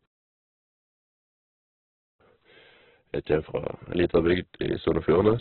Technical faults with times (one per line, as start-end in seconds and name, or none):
0.00-5.40 Opus compression